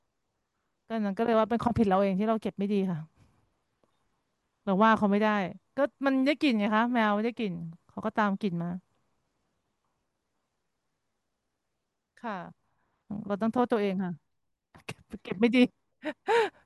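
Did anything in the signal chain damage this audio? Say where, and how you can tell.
No, nothing along the chain seems to have harmed this one, since there's no point in the recording where the sound falters, breaks or changes character in a way that would give a damaged stage away.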